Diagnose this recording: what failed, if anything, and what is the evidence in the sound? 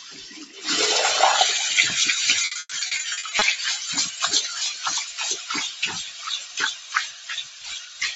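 Call processing stage: a noise suppressor meant for speech stayed active on this recording of everyday sounds. It treats sustained tones, ambience and decays as noise and pulls them down, while sharp onsets pass largely intact. Its gain moves by around 10 dB as the content shifts, so the level pumps and the sound thins out over the whole clip. The band is limited to 8 kHz by the Opus call path.

The same suppressor cuts specific stretches harder than the rest. The level drops by up to about 7 dB at 0 to 0.62 s, 5.05 to 5.2 s, 6.03 to 6.58 s and 6.74 to 8.01 s. In these spans the steady or fading parts sink and their tails are clipped short, because the gain rule reads them as background noise rather than wanted signal.

Network stage: repeated packet loss between 2.41 and 3.43 s produces choppy, robotic sound. Holes keep appearing, the longest about 120 ms, and each is patched by extending the previous audio. 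About 440 ms is filled this way, roughly 43% of the span, so pieces of the sound are missing and the repeated patches give it a stuttering texture.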